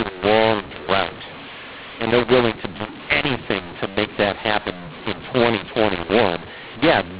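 From start to finish the speech sounds harsh and gritty, with levels jumbled and pauses filled with hiss instead of silence. The cause is mu-law and A-law mixed up: G.711 telephone audio written with mu-law is read back as A-law, scrambling every sample's level.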